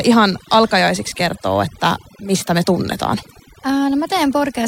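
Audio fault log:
Throughout: overdone noise removal. The noise reduction on this speech was pushed too hard, so bands sitting close to the noise floor get knocked right down, taking the softer parts of the voice with them. You're left with near-silent gaps full of twinkly specks.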